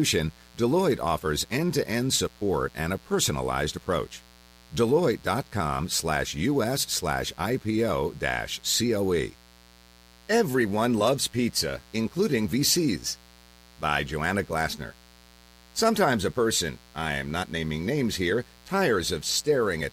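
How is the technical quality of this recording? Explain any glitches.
The recording has one clear flaw: mains buzz runs through the whole speech clip. Sharp spikes, twice per 60 Hz mains cycle, leak into the signal path, spreading harmonics into the kilohertz range as a steady, raspy buzz about 30 dB below the speech.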